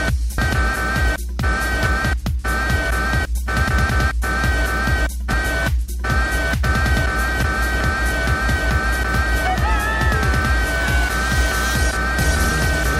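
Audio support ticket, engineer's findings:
Mains hum, whole clip. Steady 60 Hz tone with low harmonics, nearly as loud as the program. Probable ground loop or nearby transformer. Power-line current leaking into the signal path before capture. Check grounding and cable routing first.

Damaged data in a compressed stream at 0.38 s and 5.33 s. Brief chirp or blip. Probable corrupted bytes in file or stream. Decoder misreads the frames, loses sync, jumps to the next valid header.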